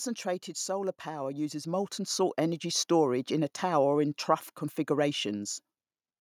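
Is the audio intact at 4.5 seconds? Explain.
Yes, at 4.5 seconds the speech plays through intact, with no dropout, click, distortion or other fault to be heard at that moment.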